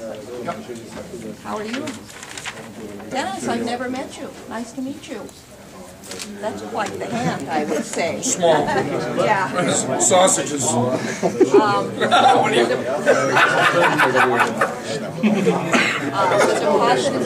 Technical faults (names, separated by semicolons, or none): none